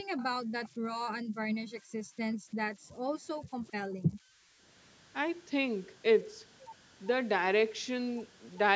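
Throughout the speech, converter idle tones sit underneath: a faint whistle near 1.5 kHz, about 26 dB below the signal, from an undithered delta-sigma converter cycling through repeating bit patterns. Unlike mains hum, the pitch is high, and it shows most in the pauses.

From 0.03 to 0.86 s and again from 1.22 to 4.64 s, the background is gated by the echo canceller. While the far end plays, it pulls the microphone down by as much as about 40 dB. The room tone drops out for short stretches, under half a second in the first span and around two seconds in the second, then returns. A fade would be smooth and gradual, but these are hard dips.

Echo leak scraps appear at 0.17 to 0.24 s, 0.64 to 0.69 s and 3.67 to 3.72 s. They are copies of the speech arriving 399 ms late and roughly 25 to 35 dB down. The likely cause is residue that the far side's echo canceller failed to remove. Unlike room reverberation, these copies are distinct delayed fragments rather than a smooth tail. 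The audio carries nothing above 8 kHz, in line with ordinary call processing.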